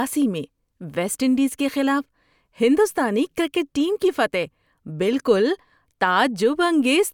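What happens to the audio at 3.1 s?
Nothing goes wrong at 3.1 s; the speech runs on intact through that moment with no dropout, click or distortion.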